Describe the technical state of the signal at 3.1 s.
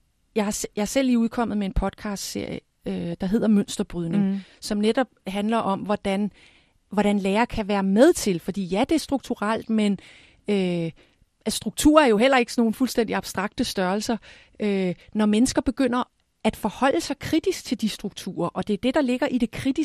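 DAB burbling at 3.12 s, just before "der hedder": bit errors slipped past error correction into the MP2 data, so wrong samples put short blips of noise into single sub-bands and wrong scale factors make sub-bands jump in level for an instant. It is a brief burst of burbling, consistent with a small fraction of corrupted bits.

Beneath it, the speech carries plainly audible MP2 compression. The sound is dull, with a granular, gurgling edge where sparse bits leave upper sub-bands switched off or flickering and the rest coarsely quantised. This likely reflects encoding at around 80 kbps.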